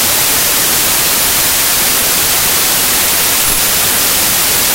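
From start to finish the speech sits under loud, harsh noise, slowed to 0.75 times its speed with pitch lowered to match. That points to a wrong sample width, with 32-bit integer data read as packed 24-bit. Half of the 3-byte reads straddle the original 4-byte words, so most values are nonsense and only some carry the true top bits. A simple sample-rate error would shift speed cleanly without noise, and a byte-order error would add noise without changing speed.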